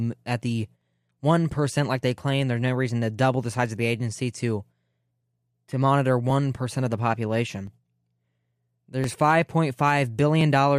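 From just after "at the", at 0.81 s, a click or pop recurs every 1.37 s until about 10.41 s. That makes roughly seven slips, evenly spaced through the speech. This is the signature of clock drift buffer slips. The likely cause is two devices running on separate clocks, apart by something like 700 parts per million. The buffer between them drifts until a block of around 50 samples is dropped or repeated, and each jump sounds as a brief tick.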